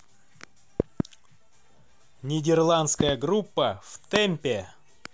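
Loud pops strike at 0.80 to 1.02 s and 3.01 to 3.11 s, each a quick double. A single one follows at 4.16 to 4.18 s. They peak roughly 15 to 20 dB above the speech, which carries on underneath. A sudden voltage spike, likely from a plug, switch or static, caused them.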